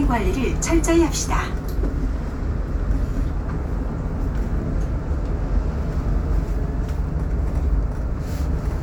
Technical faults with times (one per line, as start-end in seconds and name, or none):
none